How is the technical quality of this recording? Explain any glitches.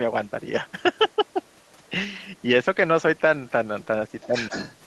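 The recording has two kinds of echo-control glitch, with the later ones most audible.

Other side's voice leaking through, at 0.27 s, 0.67 s, 0.96 to 1.89 s, 2.23 to 2.43 s and 4.1 s to the end: a second voice sits under the speech. It is very faint at first but only about 10 dB down at the end, likely loudspeaker echo the canceller failed to remove.

Speech suppressed in double talk, 4.27 to 4.34 s: the main voice dips by about 10 dB for 70 ms, likely because the canceller turned everything down while both sides spoke.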